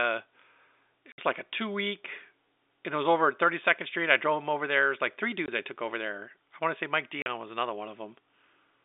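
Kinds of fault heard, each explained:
Packet loss filled with silence: packets went missing and the receiver played nothing in their place, so the speech drops out with hard edges for 60 ms before "like a two", 20 ms after "like three" and 40 ms after "want to say mike", which fits 20 ms packets.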